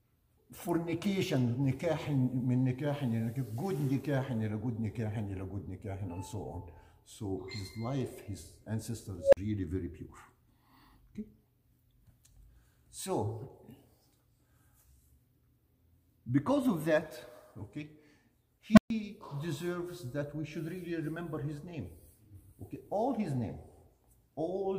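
Unstable filter at 9.21 s and 18.73 s. A tone near 500 Hz, then 200 Hz, swells within about 120 ms and 41 ms. It overflows and drops to silence for 43 ms and 128 ms until the filter resets.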